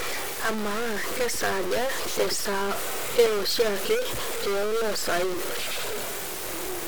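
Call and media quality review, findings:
Harsh, buzzy distortion riding on the speech for the whole clip; pauses never go quiet, filled with a gritty noise floor. Stuck bit, likely a broken data line or converter bit. About half the samples offset by that bit's weight, a fairly high bit with a step of about -25 dBFS, flipping with the sign of small values in silence.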